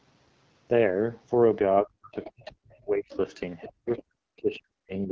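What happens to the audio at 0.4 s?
At 0.4 s the speech sounds rough and raspy, with a hissy, artificial top end. This is the AMR wideband (HD Voice) codec at 8.85 kbit/s, and it affects the whole clip. At this low rate the pulse-driven vocal tract model has too few bits to follow the waveform closely. The band from 6.4 to 7 kHz is filled with shaped noise rather than real detail.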